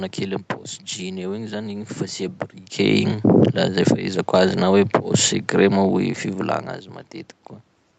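From 2.79 s to 6.08 s the automatic gain falls. The gain control judged the input too loud or its background noise too strong, and lowered its gain gradually, by about 3 dB. The voice sinks slowly, and the room noise sinks with it.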